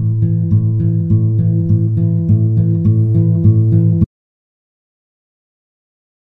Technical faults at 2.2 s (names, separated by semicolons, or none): none